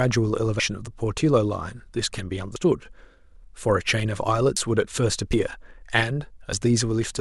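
At 0.60, 2.56, 4.57, 5.33 and 6.53 s the speech jumps ahead with no gap, losing around 150 ms, 100 ms, then about 40 ms thrice. Likely a dropped buffer (overrun), not a dropout, since nothing falls silent.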